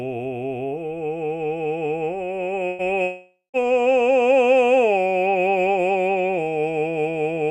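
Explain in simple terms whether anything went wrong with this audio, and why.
A burst of packet loss hits the music at 2.67 to 2.82 s. A short run of data packets never arrived in time, so the player stretched the last sound out and faded it, then jumped ahead, skipping about 120 ms of the music.

A long network dropout is the likely cause of what happens from 3.03 to 3.57 s. The last sound is stretched out and fades, goes silent for about 0.15 s, then returns further on. With nothing arriving, the player kept stretching the last sound until it ran out, and about half a second of the music is missing.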